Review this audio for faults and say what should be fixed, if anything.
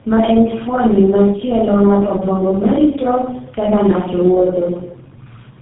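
Tandem speech coding runs through the whole clip. The speech sounds rough, muffled and warbly, beyond what one coder would cause. Nothing is present above 3.8 kHz. The damage fits three low-rate speech codecs in a row, ending in something like GSM full rate. Each stage decodes the signal and encodes it again. Every new coder then models audio the last one already distorted. The errors stack. To prevent it, carry the original coded speech end to end, or transcode only once at a single border.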